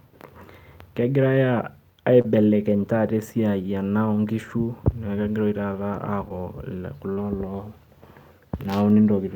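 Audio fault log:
2.21–2.25 s, 6.29 s, 7.13–7.18 s: short concealed packet loss, brief smears or wobbles where 20, 10 and 40 ms of audio arrived late and the receiver extended the preceding sound to bridge each gap.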